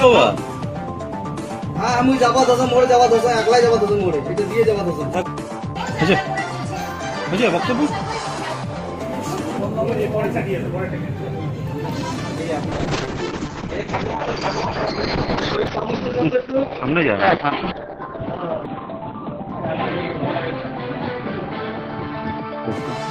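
A call bitrate drop starts at 12.72 s and lasts to the end: the call's bandwidth estimate collapsed and the encoder was pushed to spend far fewer bits, consistent with a fall from about 32 kbps to around 7 kbps. The audio turns coarse and watery, and its bandwidth narrows from 20 kHz to 4 kHz, so the top end disappears and everything sounds muffled. The worst stretch lasts about 5.74 s, with no recovery.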